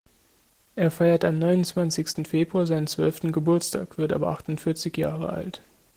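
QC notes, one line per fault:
Throughout: Opus voice compression, plainly audible across the speech. The codec's hybrid mode splits the band, coding everything below 8 kHz with the SILK linear-prediction coder and the upper range with a thin CELT layer. At this rate the excitation is quantised coarsely, so the voice takes on a muffled, hoarse, slightly robotic edge. The degree of damage fits a bitrate around 16 kbps.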